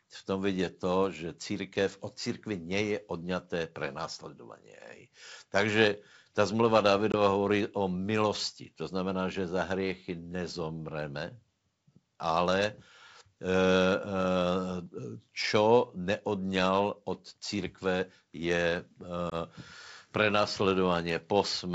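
At 7.12–7.15 s, between "ta zmluva" and "hovorí o milosti", and at 19.30–19.34 s after "od církve je", there's packet loss on an ADPCM call. Roughly a packet's worth of audio, 20 ms, drops to hard-edged silence. The decoder's predictor and step size slip out of sync, so speech returns slightly distorted.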